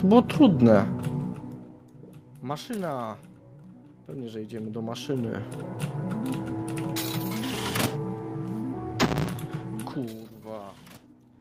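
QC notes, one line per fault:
Nothing stood out on listening to this audio.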